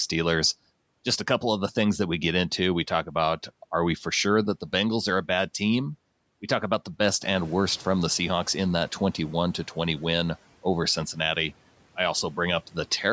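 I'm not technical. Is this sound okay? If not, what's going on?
No. Between 7.22 and 9.24 seconds there is a noise suppressor catching up. Around the 7-second mark the background noise in the room suddenly gets louder. The call's noise-reduction feature was tuned to the quieter room, so for about two seconds it lets the louder noise through with less reduction behind the speech. By 9.24 seconds it has adjusted, and the noise sinks.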